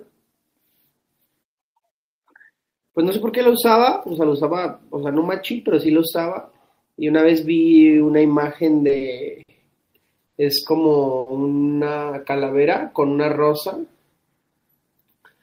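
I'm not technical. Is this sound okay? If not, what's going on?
No. Between 8.87 and 11.28 s (at 8.87, 8.97, 9.42, 10.26 and 11.19 s) there are five short stalls from late packets: the speech briefly hangs on a sound for 20 to 70 ms while it waits, then carries on. From 14.50 to 15.41 s there's a jitter buffer speed-up: the speech runs about 11% faster at the same pitch, trimming roughly a tenth of a second so it sounds a bit hurried.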